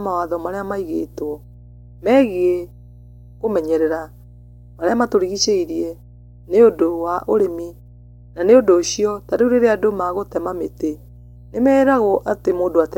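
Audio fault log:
throughout mains hum: power-line coupling adds a steady 60 Hz tone about 25 dB below the speech, fixed in pitch, unlike broadband rumble or fan noise.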